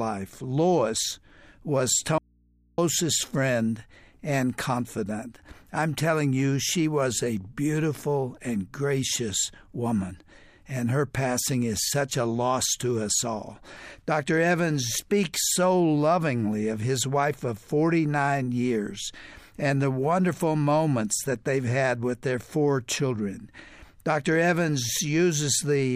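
From 2.18 to 2.78 s the sound cuts out abruptly, leaving only faint mains hum far below normal level. This is an audio dropout to a faint residue, likely from the signal being lost while the input stayed live.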